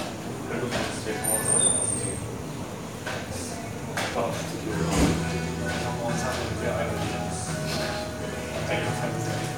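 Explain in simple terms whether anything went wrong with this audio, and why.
Three short blips, at 0.98 s, 4.14 s and 7.76 s, come from damaged data in the compressed stream. Part of the file got corrupted, so the decoder stumbled there, lost its place briefly, and spat out a quick glitch before picking the sound back up.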